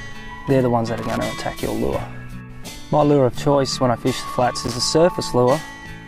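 Short irregular bursts of crackle and scratching at 0.98 to 1.17 s and again at 4.65 to 4.77 s are loose connector crackle, a worn contact intermittently breaking the signal.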